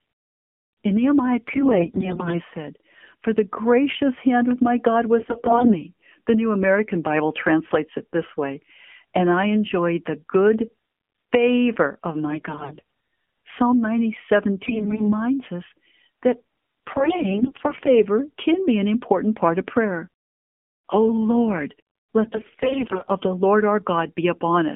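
Throughout, the speech carries the sound of the AMR narrowband mobile codec. The line is confined to roughly 200 Hz to 3.4 kHz, so sibilants lose their top and the low end is thin. The coder rebuilds the voice from a vocal-tract model excited by sparse pulses, and at this quality, which fits a low mode around 7.4 kbps, the damage is plainly audible: a buzzy, synthetic edge on voiced sounds.

AMR bit errors then hit six stretches: 1.48 to 2.41 s, 5.20 to 5.82 s, 12.28 to 12.82 s, 14.64 to 15.13 s, 16.90 to 17.98 s, and 22.22 to 23.10 s. In each, the frames still decode, but their weakly protected bits arrive corrupted. The excitation pulses fall in the wrong positions, and the fine gain and spectral values drift. Pitch and loudness hold roughly steady while the voice turns hoarse, scratchy and gargly. The last burst is the heaviest, with around a fifth of those bits flipped, against roughly a tenth to 15 percent in the other bursts.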